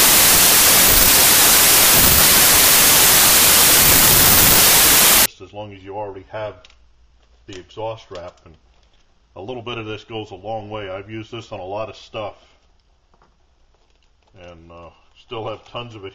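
From the start to 5.26 s the audio shows a wrong sample width fault. The bytes sound as if they were written as packed 24-bit samples and read back as 32-bit ones, so each value straddles sample boundaries and only some keep the true top bits. The result is loud, harsh noise with the original sound buried in it, playing about 1.33 times too fast and correspondingly raised in pitch.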